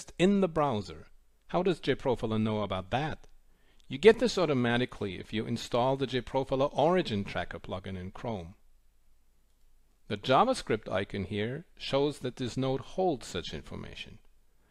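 Nothing technical jumps out here; the audio runs along steadily with no glitches, gaps or other problems to point to.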